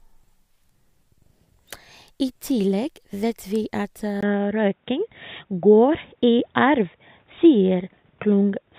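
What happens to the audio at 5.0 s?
At 5.0 s the recording is running through what is likely an input switched to a poorer device, in effect from 4.21 s to the end. The new input cuts everything above 3.8 kHz, so the speech turns dull and boxy. A brief gap of about 20 ms marks the change. The level shifts by a few decibels, and a new noise floor sits roughly 45 dB below the signal.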